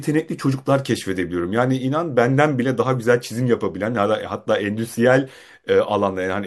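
No technical faults are audible anywhere in the speech recording.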